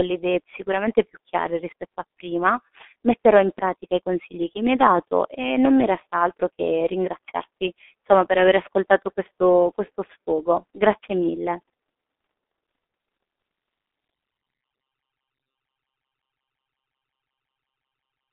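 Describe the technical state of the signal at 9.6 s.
At 9.6 s the G.723.1 codec is audible, as throughout: heavy low-bitrate coding, consistent with about 6 kbit/s, leaves muffled, hoarse speech confined to 250 Hz–3.6 kHz on the spectrogram, with smeared consonants.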